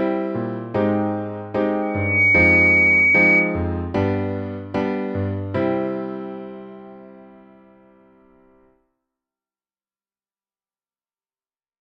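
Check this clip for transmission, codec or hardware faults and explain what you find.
One fault is present, a loudspeaker feedback squeal. From 1.82 to 3.66 s, a microphone re-amplifies its own loudspeaker, and the loop gain exceeds one at 2.3 kHz, so that tone grows by itself. A pure tone swells over a few tenths of a second to roughly 10 dB above the sound. On a spectrogram it is a bright horizontal line, and the waveform envelope bulges.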